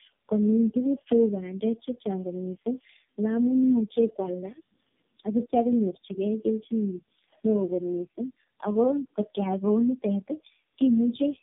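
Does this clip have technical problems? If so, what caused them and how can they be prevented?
Yes. Tandem speech coding runs through the whole speech clip: the sound is rough, muffled and warbly, as if three low-rate AMR-NB-style coders were passed one after another, each re-coding the previous one's damage. A spectrogram shows nothing above 3.7 kHz and smeared, wobbling harmonics. Prevent it by carrying the call end to end in one codec (transcoder-free operation) instead of decoding and re-encoding at each network border.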